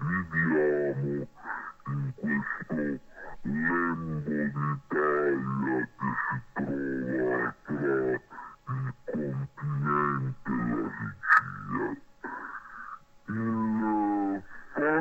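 Throughout, the sound plays at half speed and a full octave low, with a faint mirrored image in the upper spectrum: interleaved stereo samples read as mono.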